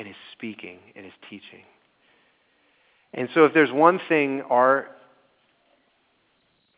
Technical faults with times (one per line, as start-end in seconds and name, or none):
none